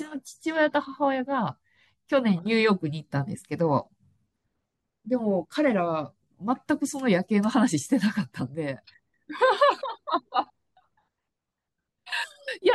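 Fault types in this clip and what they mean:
No fault types turn up in this clip.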